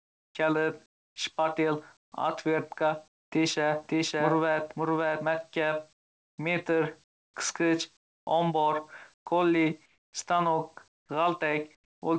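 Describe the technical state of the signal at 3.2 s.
From 3.08 to 3.32 s the real background turns into steady, featureless noise about 18 dB quieter, likely comfort noise in place of the background while the sender paused transmission.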